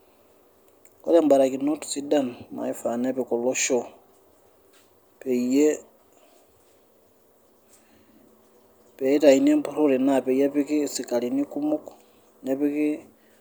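No technical faults can be heard anywhere in the recording.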